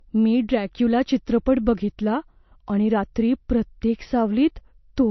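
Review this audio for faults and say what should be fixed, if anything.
Throughout the speech, nothing sounds above 6 kHz, and the swirly artefacts point to low-bitrate audio saved at a high bitrate, likely an MP3 re-encoded larger; unlike plain low bitrate, the file size misleadingly suggests quality. Prevent it by re-sourcing from the original recording rather than re-encoding an already compressed file.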